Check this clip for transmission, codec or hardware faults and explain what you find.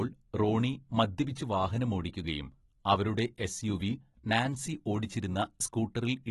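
There's one fault, running the whole way through: AAC compression, likely a low-bitrate AAC-LC encode, somewhere around 28 kbps. The encoder cuts everything above 11.8 kHz and starves the remaining bands, so the speech comes out dull and smeared, with plainly audible warbly fizz on sibilants.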